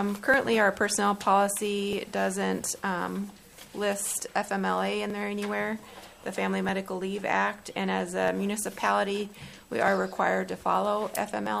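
From 0.34 s to 11.46 s a click recurs every 1.59 s, about seven in all, each one a brief tick in the sound. These are clock drift buffer slips, most likely from two devices whose clocks differ by roughly 0.1 percent, so the buffer periodically drops or repeats a small block of samples. On a waveform each slip is a sudden discontinuity. On a spectrogram it is a thin vertical broadband line, evenly spaced along the time axis.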